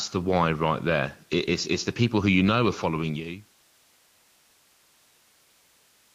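No technical faults are audible anywhere in this recording.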